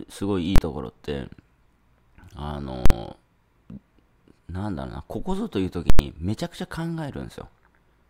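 Three violent bangs cut through the audio. At 0.56 s and again at 2.86 s each is a single hard crack, about 23 ms and 46 ms long. At 5.90 s the burst stretches to about 93 ms, so it comes apart into two pops with dead silence between, ending at 5.99 s. These are invalid numbers at full scale: a calculation produced infinite or invalid values, pinning the output to one extreme value for each processing block, which fits blocks of 1024, 2048 and 4096 samples.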